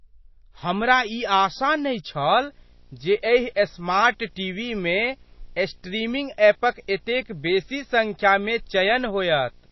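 From the start, the speech carries MP3 compression damage, plainly audible. Nothing is left above 5.8 kHz, so it sounds dull. Sibilants turn watery and swirly. The encoder was likely starved of bits, which fits a bitrate near 24 kbps.

At 2.26 s a video or display buzz begins and runs to the end. A screen or video cable is coupling into the audio. It is a 60 Hz buzz with hash above it, faint and well below the speech.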